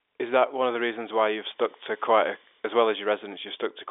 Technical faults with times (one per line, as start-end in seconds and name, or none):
none